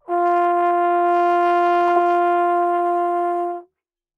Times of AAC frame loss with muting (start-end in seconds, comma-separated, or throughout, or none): none